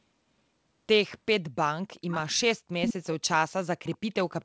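A delayed copy of the speech trails it by about 0.39 s: faint at 1.95–2.34 s, nearly as loud as the speech at 2.82–3.06 s, then barely there at 3.86–3.98 s and 4.41 s to the end. That's likely echo leak from a speakerphone whose canceller let some through.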